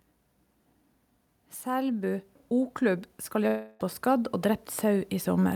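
Automatic gain rising begins at 1.62 s and continues to the end of the clip. The gain control judged the speech input too quiet and kept raising its level, so the voice and the background noise grow louder together rather than in a single step.

From 3.47 s to 3.82 s, the speech gives way to a smeared buzz that carries on from the last sound for about a third of a second. The speech then resumes with roughly 0.32 s gone. This points to a likely long network dropout, with the receiver filling the gap.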